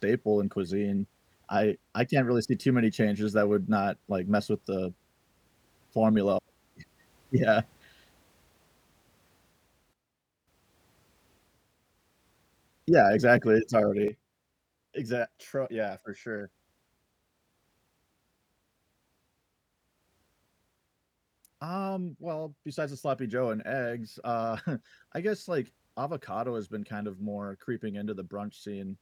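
At 9.93 s the speech and its background noise drop together by about 12 dB in a single step, then jump back up at 10.48 s. At 14.08 s a second step cuts both by about 8 dB, and the level stays down to the end. This is a sudden gain jump, likely a digital gain setting applied without a ramp. Unlike a fade or an automatic gain control, there is no gradual slope, and the noise floor falls with the speech.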